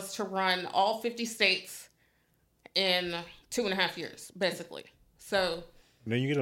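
At 1.46 s the speech carries a single sharp click, a thin vertical streak across the spectrum at that instant. The sound points to dropped samples: a handful of samples, a tiny fraction of a millisecond, likely went missing from the stream, so the waveform steps abruptly from one value to a later one. The gap is far too brief to remove any audible sound. What remains is the discontinuity, heard as that click.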